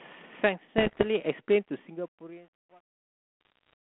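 From 0.78 to 1.06 s, and again from 3.41 to 3.73 s, the speech breaks into pops and rough, gritty bursts with brief jumps in level. These are bit errors on an ADPCM link, at roughly 1.5 and 1 percent. Each flipped bit corrupts the decoder's step size and prediction, so the damage rings on for milliseconds rather than staying a single click. Packet loss would instead leave gaps or smeared repeats. The band-limited sound fits 32 kbit/s G.726.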